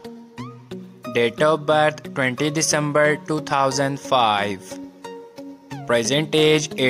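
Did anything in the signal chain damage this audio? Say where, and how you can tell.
Yes, gain pumping throughout: the level swells between loud sounds and ducks under each by around 5 dB, likely from excessive input gain held down by a fast limiter.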